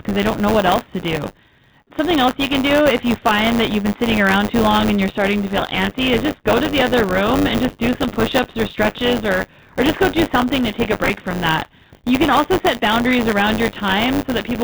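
Bluetooth CVSD headset codec damage runs through the whole speech clip: the narrowband sound stops at 4 kHz, loud high sounds outrun the adaptive step and distort, s sounds turn scratchy, and a granular hiss sits underneath, which fits a 64 kbps one-bit delta-modulation link. Buffer tearing is also present throughout as a steady robotic buzz at 100 Hz, heard only while there is signal. The writer and reader of the ring buffer have slipped, so about a tenth of each 10 ms period replays audio from around 20 ms earlier, with hard joins on both sides. Bluetooth headset packets are repeated from 7.67 to 7.75 s, between "the other room and" and "do some", and from 11.04 to 11.10 s, between "something to take a" and "from that". Lost voice packets were filled by decoding the previous packet again, giving brief rough buzzes near 267 Hz. About 22.5 ms and 30 ms are lost, scattered over 45 ms and 52.5 ms with the longest runs around 10 ms, which points to roughly six and eight missing packets.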